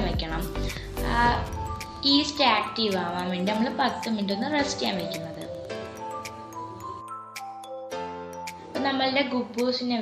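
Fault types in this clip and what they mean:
Wi-Fi interference: a nearby radio's beacon rectified in the circuit, heard as a faint tick every 102.4 ms, about 30 dB down, until 6.02 s.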